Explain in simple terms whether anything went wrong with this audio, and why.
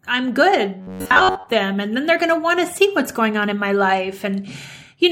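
From 0.81 to 1.49 s the speech turns into a stiff, metallic buzz at about 94 Hz, which is robotic sound from repeated short buffers. The likely cause is new audio arriving too slowly, so the software kept replaying a sliver of about 11 ms for most of that stretch, skipping real sound. Unlike a plain dropout or stutter, the sound never goes silent or jumps. It keeps loosely following the speech but with a fixed, machine-like buzz.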